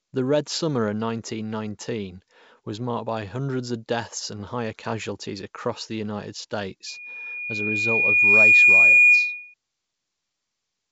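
From 6.86 to 9.54 s, loudspeaker feedback squeal: the microphone re-amplifies its own loudspeaker, and a 2.4 kHz tone swells over roughly 1.5 s to about 15 dB above the speech.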